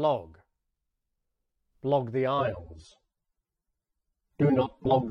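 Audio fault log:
2.39–5.10 s, adaptive stream at a lower bitrate: quality changes abruptly with no gap. Coding artefacts rise until the end, which fits the stream dropping from 96 to 24 kbit/s AAC as the connection slowed.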